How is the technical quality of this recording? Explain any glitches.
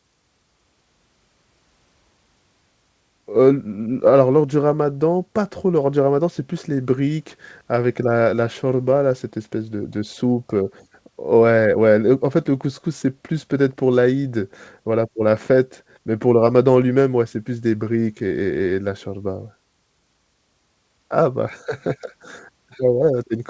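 No glitches turn up anywhere in this speech recording. It has the narrowed sound of audio sent over a WebRTC call path, with nothing above 8 kHz, which fits a wideband call codec such as G.722 at 64 kbps, and that's just how the line sounds rather than anything going wrong.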